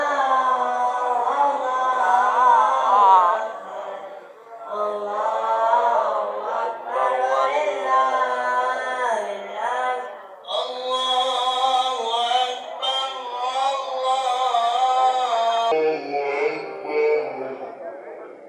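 From 15.72 s to the end, a section at the wrong speed plays at about 0.69 times its proper rate, so everything slows and drops roughly seven semitones, turning deep and sluggish. The likely cause is playback or editing against a mismatched clock. Unlike a pitch shift or a time-stretch, which change only one property, here tempo and pitch fall together and abruptly at one point.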